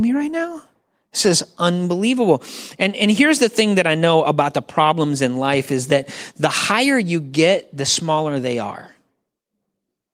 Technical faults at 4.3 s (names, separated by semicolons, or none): none